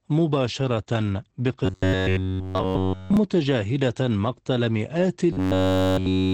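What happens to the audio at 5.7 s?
From 5.33 s to the end of the clip, the sound turns into a rigid metallic buzz at about 94 Hz: robotic sound from repeated short buffers, likely from a roughly 11 ms chunk looping while fresh audio goes missing. Unlike codec roughness, it imposes one fixed pitch. Underneath, Opus voice compression at 12 kbps leaves speech muffled and slightly hoarse, with nothing above 8 kHz, a steady dullness rather than a buzz.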